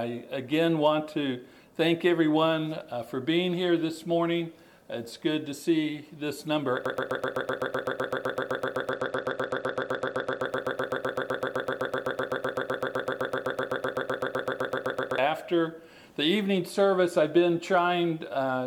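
A broken-record loop runs from 6.86 to 15.18 s, where a 127 ms piece repeats back to back, likely from a stalled player or stream; the waveform shows identical tiling. From 8.92 to 10.45 s, a Bluetooth SBC bit pool drop dulls the treble and adds grit. The spectrogram's upper bands empty out, which fits a fall from bit pool 31 to 13, near 94 kbps.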